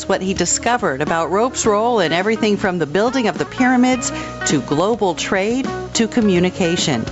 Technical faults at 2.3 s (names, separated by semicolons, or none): gain pumping